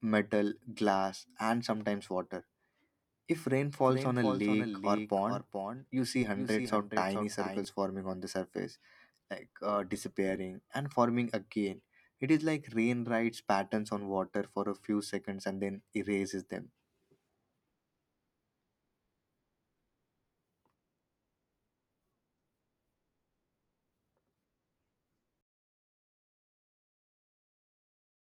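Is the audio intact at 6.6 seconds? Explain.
No, at 6.6 s you're inside a doubled audio track running 3.85 to 7.65 s, just before "forming on the surface": a dry copy around 5 dB quieter trails by roughly 400 ms, likely from a second, slower capture path.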